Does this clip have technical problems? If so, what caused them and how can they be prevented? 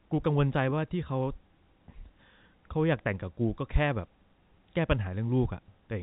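No, this speech has no technical problems to report.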